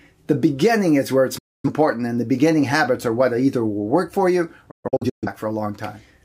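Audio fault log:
1.38 to 1.70 s, digital broadcast dropout. The sound fades out over about 8 ms and stays silent for about 256 ms. The receiver muted while corrupt or missing frames arrived, consistent with six lost frames. Nothing from that gap returns.
4.71 to 5.28 s, digital broadcast dropout. Several short holes are scattered across about 512 ms, totalling about 341 ms of silence. The longest is 128 ms. Muting switched on and off as damaged frames alternated with good ones.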